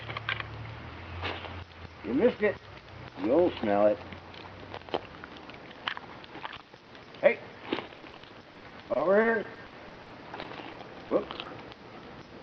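From 7.87 s to 11.48 s the audio breaks up with repeated packet loss (robotic sound), roughly two dozen short dropouts, none longer than 50 ms. Some holes are filled by extending the preceding sound and others stay silent, giving a choppy texture with pieces missing.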